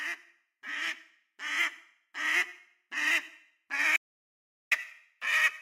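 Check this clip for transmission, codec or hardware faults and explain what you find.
There's one fault here, an audio dropout to silence from 3.97 to 4.71 s. The sound cuts to silence for about 0.75 s, no room tone at all, likely a momentary input loss while recording carried on.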